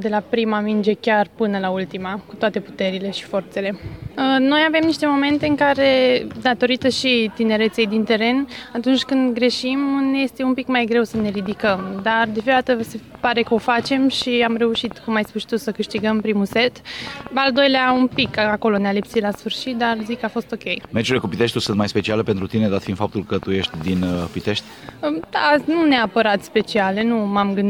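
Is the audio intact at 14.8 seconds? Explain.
No. Something, likely electrical interference or a faulty connection, is injecting pulses into the signal, producing a train of clicks from 11.2 to 27.44 s. That is around seventy similar clicks at an uneven pace of about 4.6 per second, popping roughly 5 dB above the sound, including in pauses.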